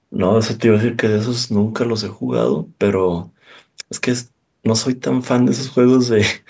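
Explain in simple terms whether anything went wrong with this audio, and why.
Nothing went wrong with this speech recording: it passed through a call's normal microphone processing, which trims the deepest bass and leaves nothing above 8 kHz, and that is ordinary behaviour rather than a fault.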